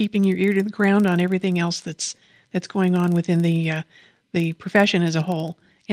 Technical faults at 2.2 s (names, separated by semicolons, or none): filter restarted on every block